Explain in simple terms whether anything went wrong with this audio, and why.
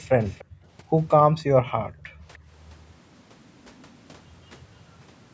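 Two things went wrong. From 0.2 to 0.45 s there is an echo leak: a faint, delayed copy of the speech, arriving about 0.3 s late. It is likely that the far end's loudspeaker was picked up by its microphone and not fully cancelled. Unlike room reverberation, which smears sound smoothly, this is a distinct late repeat.

Then there is background gated by the echo canceller. The room sound briefly drops away from 0.45 to 0.68 s, and again for most of 1.47 to 2.49 s, before coming back. This is the canceller turning the microphone down while it suspects echo. Unlike a dropout, only the background dips.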